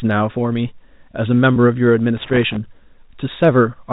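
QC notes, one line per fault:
1.54–1.56 s, packet loss with pitch repetition. About 20 ms of audio drops out, which points to a single lost packet. The receiver bridges it by repeating the last pitch period. The speech briefly sounds held and slightly buzzy before resuming.
2.17–2.56 s, loose connector crackle. An irregular burst of crackle and scratching lasts about 0.4 s. A worn or dirty contact makes and breaks rapidly, chopping the signal.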